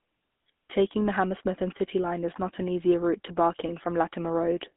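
A buzzy, gravelly roughness sits on the speech from start to finish, with a narrow telephone-band tone running from about 200 Hz to 3.6 kHz and nothing at all above 3.8 kHz. The fault is the GSM full-rate codec: the voice is rebuilt from a vocal-tract model fed by a sparse, evenly spaced pulse train, and the coarse excitation produces the grainy buzz. The degree of damage fits a 13 kbps GSM full-rate link.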